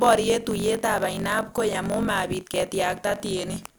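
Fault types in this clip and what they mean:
Block size mismatch (truncated): the producing stage delivers blocks larger than the consuming stage takes in, and each block's surplus tail is dropped. Throughout this speech a 46.9 Hz buzz sits under the sound, consistent with 1024-sample reads, and delivery runs 1.12 times fast at roughly normal pitch.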